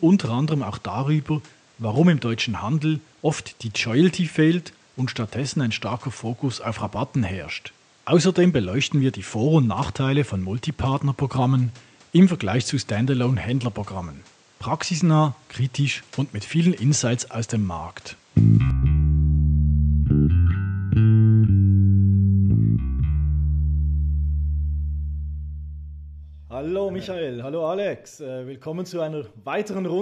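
From the start to 18.70 s, the sound is band-limited, with nothing above 9.2 kHz. It has its own noise floor, roughly 35 dB below the signal, and sits several decibels apart in level. At 18.70 s it clears abruptly, with no gap. This is likely an input switched to a poorer device.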